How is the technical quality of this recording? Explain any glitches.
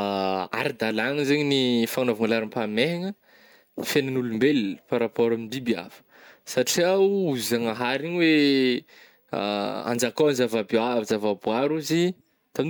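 No technical glitches can be heard anywhere in this speech recording. There is nothing in the audio that calls for a fault explanation.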